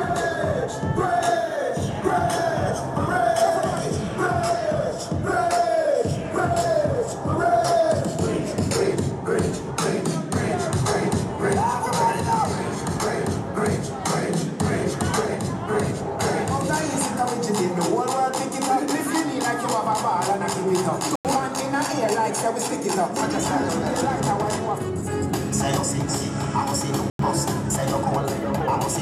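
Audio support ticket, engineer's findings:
Corrupt FLAC frame, 0.97 to 1.00 s. Brief error, peak about -23 dBFS, then clean audio resumes. Component: FLAC decoder, checksum not enforced. Flipped bits fed wrong values into the predictor. Error confined to a single frame. Next intact frame decodes normally.

Corrupt frame muted, 21.15 to 21.32 s. Abrupt dropout to silence, about 170 ms. Length fits four frames of roughly 42 ms. Component: decoder rejected damaged compressed frames. Player substituted silence. Timing held.

Corrupt frame muted, 27.07 to 27.19 s. Same symptom, about 130 ms. Fits three frames of similar length. Same mechanism: frames refused, gap filled with silence, no time shift afterwards.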